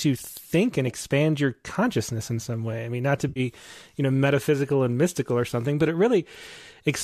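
At 3.29 to 3.40 s, between "I mean not to" and "you know metaphysical and", there is AAC frame loss with concealment. About 70 ms of coded audio went missing, which fits roughly seven short frames of low-delay AAC, the likely codec here. The decoder bridged the gap by reusing the last good spectrum, so the speech turns into a brief smeared, noisy, phasey patch. On a spectrogram, the harmonic striations blur into a grainy block. The waveform shows an envelope that lingers instead of tracking the speech.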